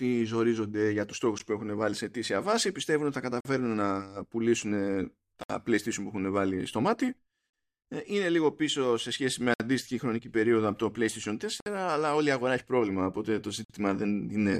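Timestamps of consecutive 2-second stream segments fail to meet, producing a gap between stream segments that the player fills with silence. Hard-edged holes cut the speech at 1.39 s, 3.41–3.45, 5.43–5.50, 7.50–7.53, 9.54–9.60, 11.60–11.66 and 13.65–13.70 s, each lasting 14 to 61 ms, with no audio lost.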